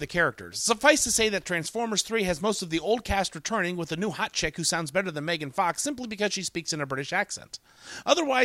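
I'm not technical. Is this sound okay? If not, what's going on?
Yes, this sound is fine: nothing in it points to a technical problem with how it was recorded, transmitted or played back.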